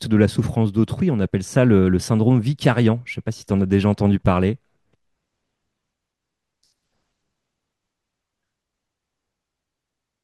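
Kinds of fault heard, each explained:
block of digital silence: a run of about 7 ms of samples was replaced by zeros at 4.26 s, so the speech cuts abruptly to dead silence and back with no fade, and the hard edges make it sound like a single short tick.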